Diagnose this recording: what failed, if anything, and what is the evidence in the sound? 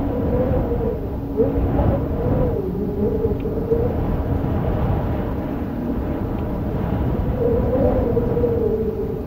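Nothing failed in this recording.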